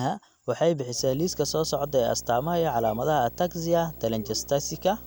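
From 0.98 s to the end of the speech, a video or display buzz is present: signal from a screen or video cable is leaking into the audio path. The picture's field rate couples in as a steady 59.94 Hz buzz with gritty hash riding above it, joined by a thin, very high whine at the 15.7 kHz line rate. The interference sits roughly 20 dB below the speech.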